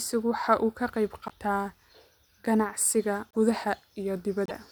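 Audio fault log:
1.27–1.32 s, 3.31–3.36 s and 4.46–4.51 s, broken MP3 bit reservoir: each is a garbled blip of about two 26.1 ms frames where the speech skips forward. The likely cause is dropped frames leaving the next ones decoding borrowed bytes from the wrong frame.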